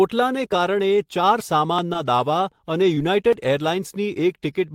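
At 1.93 s and again at 2.95 s, short concealed packet loss leaves a brief smear where about 20 ms of speech went missing. The receiver extended the preceding sound rather than leaving silence, which separates it from a dropout.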